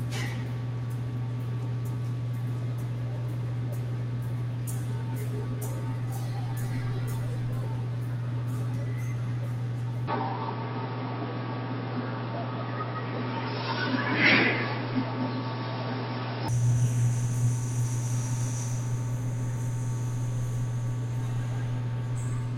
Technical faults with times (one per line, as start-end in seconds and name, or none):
10.08-16.48 input switched to a poorer device